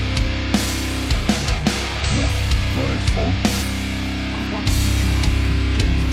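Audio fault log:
2.00–2.06 s, 3.58–3.64 s, 4.46–4.52 s: compressed frames skipped. Whole frames of the coded audio never reach the output, so the sound jumps ahead by about a tenth of a second, then about a fifth, then about a tenth.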